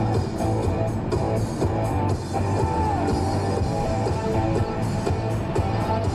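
No technical faults can be heard in this audio.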